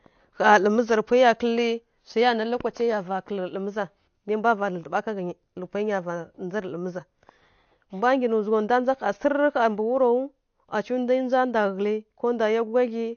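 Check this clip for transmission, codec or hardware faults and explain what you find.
One codec fault runs through the whole clip. AAC compression, likely AAC-LC at a low rate near 32 kbps, leaves nothing above 6.6 kHz, so the speech sounds dull, while sibilants smear into a fizzy, warbling texture. A simple low-pass filter would sound dull but clean; here the swirling artefacts come from the coarse quantisation of each frame's frequency lines.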